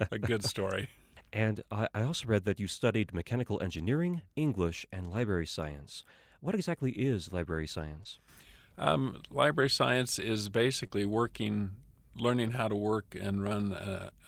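Lost packets rebuilt from error correction occur at 3.19 to 3.21 s, just after "read that you studied", then at 5.13 to 5.19 s and 6.67 to 6.69 s. Each time, the next packet's low-bitrate backup copy filled the hole, so nothing drops out. Instead the speech turns briefly rougher and noisier, for 20 ms, or 40 ms at 5.13 s.

Short concealed packet loss hits at 8.03 to 8.07 s. The decoder stretched the preceding sound into the missing stretch, then blended back, leaving a brief smear. A rebuilt copy follows at 8.05 to 8.07 s.

Further error-correction rebuilds come at 9.61 to 9.67 s and at 10.83 to 10.85 s, right after "science is". A second concealed loss follows at 10.87 to 10.92 s, heard as a quick wobble. The longest rebuild, 60 ms of coarser sound, runs from 12.44 to 12.54 s.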